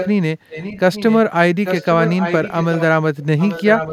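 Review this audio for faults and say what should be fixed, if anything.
Echo leak at 0.0–0.1, 0.49–1.18, 1.64–2.83 and 3.38–3.92 s. The speech returns 0.84 s late, roughly 5 to 15 dB quieter. The likely cause is a loudspeaker echo canceller missing its pickup. Using headphones on the far end, or retuning its echo canceller, would prevent it.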